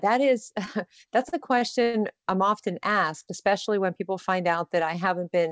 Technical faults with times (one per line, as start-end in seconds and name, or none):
1.29-1.63 short stall from a late packet
1.83-1.96 call audio freeze